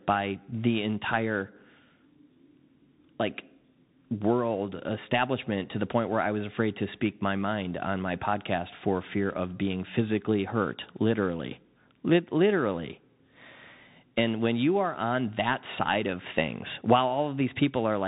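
From start to finish the speech carries the sound of the Bluetooth CVSD headset codec, the narrowband link used by headsets. Nothing above about 3.8 kHz survives, so the audio is dull and boxed-in. CVSD sends one bit per sample to step the waveform up or down, which fits a 64 kbps stream. Loud high-frequency energy outruns the adaptive step and distorts, s sounds come out scratchy, and a granular hiss sits under the speech.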